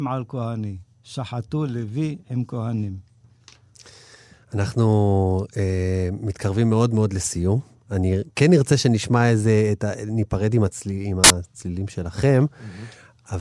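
A sudden blast of very loud white noise with hard, abrupt edges cuts into the speech from 11.24 to 11.30 s, about 60 ms of loud static. This is file tags played as audio: part of the file's metadata, here an embedded cover picture, has been read as though it were sample data. Because the picture is stored as compressed data, its bytes look essentially random when treated as audio, so they decode to a short stretch of very loud noise.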